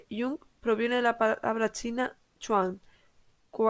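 No technical faults can be heard in the speech, which comes through a wideband call path with its content stopping at 8 kHz and only the coding texture expected of such a codec, consistent with G.722 at 64 kbps.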